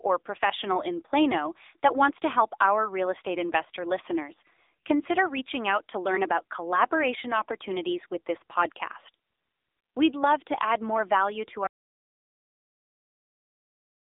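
From start to finish, the speech passes through an AMR narrowband mobile codec, the low-rate speech coder of 2G and 3G phone networks. It rebuilds the voice from a vocal-tract model excited by sparse pulses, so the result sounds buzzy and synthetic, which fits a rate near 8 kbps. The band is squeezed to about 250 Hz to 3.7 kHz. On a spectrogram, energy stops at a flat ceiling at 3.7 kHz with nothing above it, and the lowest bass is thin.

At 11.67 s, right after "add more value to", an audio dropout to silence begins and runs to the end of the clip at 14.19 s. The sound cuts off mid-flow, and what follows is dead digital silence with no room tone. The likely cause is a lost input, such as a disconnected device or a failed link, while the recorder kept writing silence. The waveform drops to a flat line, and the spectrogram goes blank.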